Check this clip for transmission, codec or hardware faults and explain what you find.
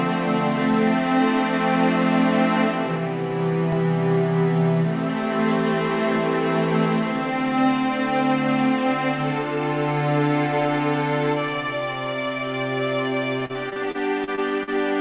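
One transmission fault is audible, heard through a call path whose band stops at 4 kHz, which fits G.711 mu-law at 64 kbps. From 13.4 to 14.69 s there is repeated packet loss (robotic sound): eight gaps, the longest 41 ms, with about 0.21 s patched in total, some 16% of that stretch. Each hole is bridged by extending the preceding sound, and the gaps come close together, so the passage turns choppy and robotic, with fragments missing.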